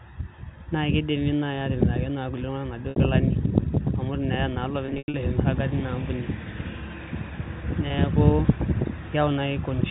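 Packet loss with pitch repetition hits at 2.90 to 2.96 s, 4.86 to 5.14 s and 7.88 to 7.90 s. Missing audio is patched by repeating the last pitch period. The short gaps buzz briefly. The middle one loses 200 ms, in runs up to 100 ms, dipping toward silence.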